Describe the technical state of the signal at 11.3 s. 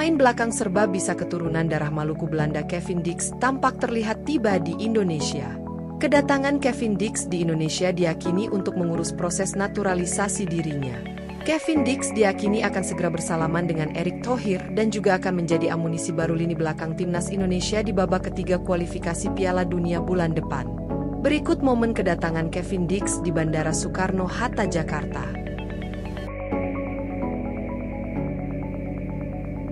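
Around 11.3 s the signal is intact, with no fault present at that moment.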